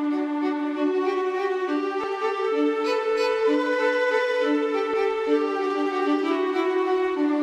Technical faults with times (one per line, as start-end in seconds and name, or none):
2.04 audio missing between chunks
4.94 audio missing between chunks